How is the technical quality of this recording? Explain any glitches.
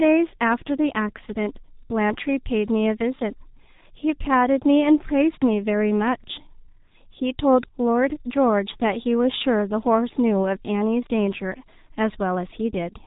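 The technical quality is poor: heavy G.723.1 codec damage runs through the whole recording. From start to finish there is no energy above about 3.8 kHz, and the speech sounds muffled, hoarse and smeared. The codec squeezes speech into coarse 30 ms frames and refreshes its vocal model only slowly, so fast consonant transitions blur together and the voicing turns rough and buzzy. The degree of damage fits a bitrate around 6.3 kbit/s.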